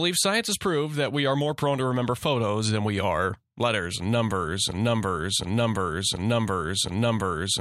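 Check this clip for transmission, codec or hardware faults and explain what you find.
One fault is present, a broken-record loop. From 4.72 s, right after "are letters and numbers", the speech stops moving forward and a fragment about 0.72 s long plays back to back four times, running to the very end of the clip. Each repeat is identical, so it sounds like a stuck record. The likely cause is a stalled player, encoder or stream that kept resending the last fragment it held, so whatever speech should have followed is lost.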